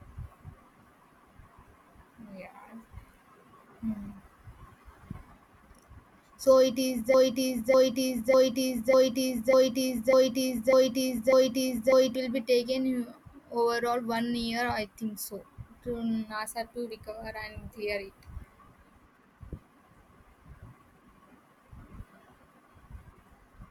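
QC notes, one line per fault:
7.14–12.16 s: broken-record loop. A fragment of the speech about 0.6 s long plays back to back eight times with no variation, then normal playback resumes just before "will be". The identical repeats point to a stage that stalled and kept resending the last buffer it held, likely a player or stream stall, so whatever should have played across those five seconds is missing rather than delayed.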